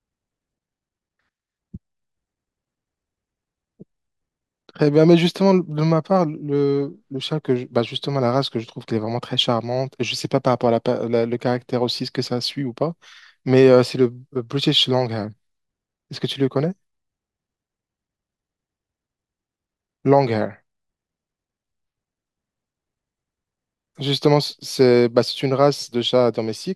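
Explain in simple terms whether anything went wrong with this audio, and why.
Nothing went wrong with this audio; there are no faults to point out.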